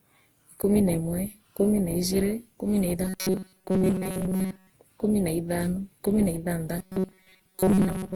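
Swirly, smeared and hollow throughout, with blurred attacks, this speech recording shows generation loss, likely from repeated lossy re-encoding, around seven passes of a codec such as Opus at a modest bitrate, each pass adding fresh quantisation noise. From 3.05 to 4.73 s and from 6.79 s to the end at 8.16 s, the sound turns into a rigid metallic buzz at 188 Hz. This is robotic sound from repeated short buffers: about 5.3 ms of audio is likely looped to cover late data while most of the real signal is skipped.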